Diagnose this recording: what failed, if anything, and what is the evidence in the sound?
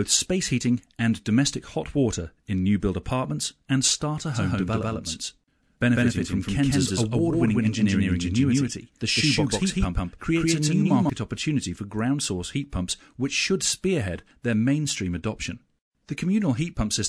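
From 4.3 s to 11.1 s there's a doubled audio track: a second, equally loud, dry copy trails by around 150 ms, cutting in and out abruptly, likely a duplicated capture path.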